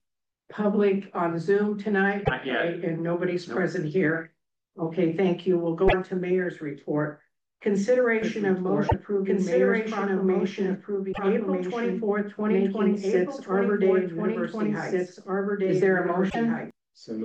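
Five short chirps and squawks, each about a tenth of a second, break into the audio at 2.21, 5.84, 8.84, 11.09 and 16.26 s. This is damaged data in a compressed stream: corrupted bytes make the decoder misread or reject the frames at those points, so it loses sync and hunts for the next valid frame header before playback resumes. From 8.22 s to 16.71 s a second full-band copy of the audio runs underneath, roughly 2 seconds behind and about 5 dB quieter. It switches on and off abruptly and carries no reverberant tail or room colouring, so it is not an acoustic echo but a doubled audio track, most likely from the same signal being mixed in a second time through a slower path or from an edit that left two offset copies.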